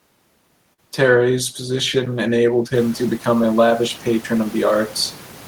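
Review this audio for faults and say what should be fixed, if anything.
Short concealed packet loss, 0.73 to 0.80 s: about 40 ms of packets missed the decoder, so the receiver stretched the preceding sound across the gap, leaving a brief smear. A deeper jitter buffer or forward error correction would let those packets arrive in time or be recovered instead of being concealed.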